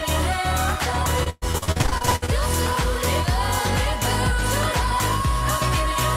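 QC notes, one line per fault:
1.23–2.30 s, repeated packet loss (robotic sound): over this stretch the audio breaks into a rapid run of short holes, the longest about 120 ms. Each hole is filled by stretching out the last sound heard, so roughly half the span is patched, not real. That gives a choppy texture with pieces missing. It is a dense cluster of patched holes, unlike a single dropout or steady codec roughness, and it clears once the stretch ends.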